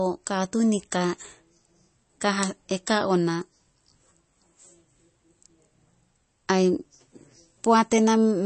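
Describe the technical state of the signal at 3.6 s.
At 3.6 s the speech carries what is likely MP3 compression at around 32 kbps throughout the clip: nothing above 8.3 kHz, and weak detail swirls watery as starved frequency lines drop in and out.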